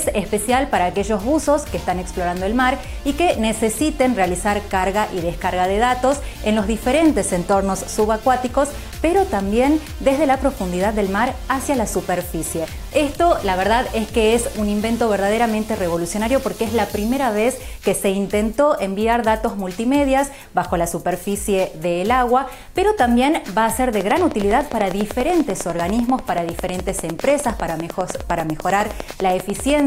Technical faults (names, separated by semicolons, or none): train of clicks